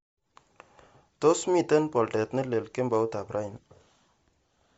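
A speech recording with plainly audible codec damage from start to finish. The voice takes on a breathy, grainy edge, and nothing survives above 7.7 kHz. On a spectrogram the energy stops at a hard ceiling near 7.7 kHz, with blotchy, noise-like patches in the upper band. The likely cause is Bluetooth LC3 compression. The texture fits a low bitrate around 32 kbps with 10 ms frames, where upper detail is discarded and refilled with noise.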